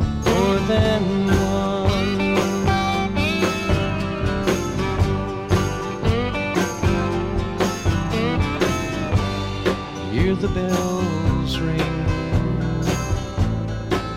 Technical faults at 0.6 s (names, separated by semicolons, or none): none